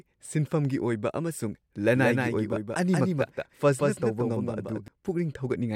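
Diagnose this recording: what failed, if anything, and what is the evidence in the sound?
A doubled audio track runs from 1.94 s to 4.88 s: a full-band copy of the speech trails by about a fifth of a second, a few dB quieter, with no decay or room colour, and it switches on and off abruptly. The likely cause is a second, slower capture path or routing mixed in with the direct one. A spectrogram shows every feature repeated at a fixed offset, with hard edges at both ends.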